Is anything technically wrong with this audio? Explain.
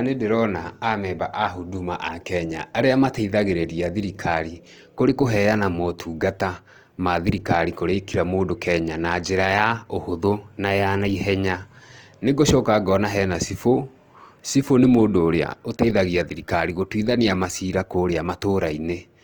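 Yes. Opus compression, throughout the whole clip: the speech carries plainly audible coding damage, likely from Opus running in its music-oriented CELT mode. When the bit budget runs short, the encoder preserves each band's overall energy but fills the detail with folded copies of lower bands or with noise. It leaves few gaps, so there is little swirling, but voiced tones sound grainy, rough and noisy. Bandwidth stays full, reaching about 20.2 kHz, and the damage fits a low bitrate of around 24 kbps.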